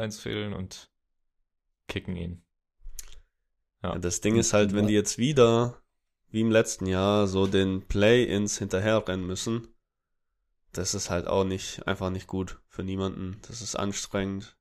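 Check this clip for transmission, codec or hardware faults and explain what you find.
Nothing wrong turns up here: the speech comes across steady and intact, with no transmission, codec or hardware trouble to point to.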